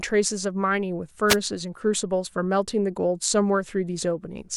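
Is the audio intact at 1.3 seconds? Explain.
No. From 1.28 to 1.37 s a brief swish of static washes over the speech. This is a wireless microphone noise hit: the analogue FM radio signal faded as reflected paths cancelled, letting receiver noise rise over the voice for about 90 ms.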